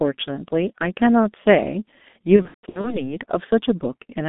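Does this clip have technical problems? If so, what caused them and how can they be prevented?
Yes. The G.723.1 codec squeezes the whole clip into a 200 Hz to 3.6 kHz band, and its heavy, hoarse smearing fits roughly 6 kbit/s. Using a wideband codec at a higher bitrate would prevent it.

From 2.36 to 3.14 s, VoIP packet loss concealed by the speech codec leaves buzzy, fading stretches where about 300 ms went missing, with the longest gap 150 ms. A jitter buffer, forward error correction or a steadier network path would help.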